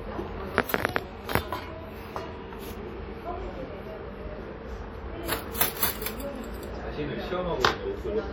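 A transform codec, likely WMA compression of an early, simple kind, has coded this recording of sounds throughout, and the damage is plainly audible. The long transform blocks spread quantisation noise over tens of milliseconds, so transients ring and smear into a washy haze, while a hiss rises and falls with the signal. Weak spectral detail is dropped, which fits a bitrate around 48 kbps, even though content still reaches about 20.1 kHz.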